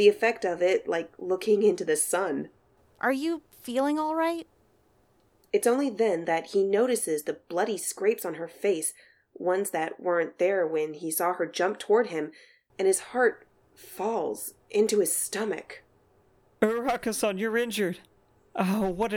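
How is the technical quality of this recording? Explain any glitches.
The recording's technical quality holds up throughout, with no glitches anywhere in the signal to explain.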